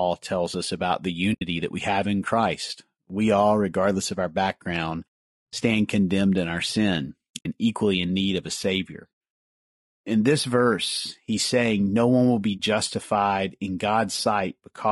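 Speech, with a rough, grainy texture from start to finish. Noise sits between the harmonics of the voice. The top band sounds thin and synthetic. This damage is plainly audible. It is likely low-delay AAC compression, the AAC-ELD kind used in video calls. The grain points to a low bitrate, around 32 kbps. There are also three short holes from AAC frame loss with muting. They fall at 1.33 to 1.42 s, 7.38 to 7.46 s and 12.57 to 12.60 s. The sound fades out and back in with soft edges. The first two leave gaps of about 80 ms each, which fits four lost frames. The last is about 20 ms, which fits a single lost frame. In each case the decoder set the missing spectrum to zero, and the overlapping windows smoothed the edges.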